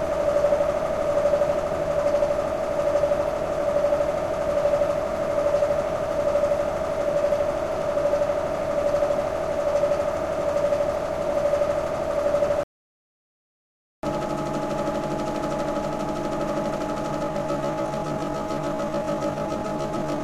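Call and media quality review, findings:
Playback stall, 12.63–14.03 s: sound cuts out mid-flow, about 1.4 s of silence, then resumes. Likely player-side underrun or blocked audio thread; output starved of data until the buffer refilled.

Time-stretched section, 17.20 s to end: pace drops abruptly to roughly 0.56x while pitch holds. Likely pitch-preserving stretch in processing, padding duration by repeating short overlapping segments.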